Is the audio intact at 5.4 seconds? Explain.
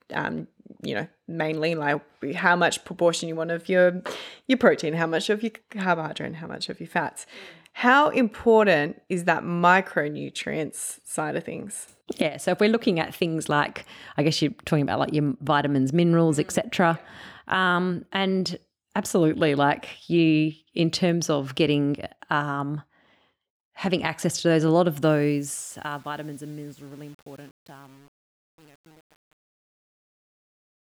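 Yes, the speech is intact at 5.4 seconds, with no fault at that moment.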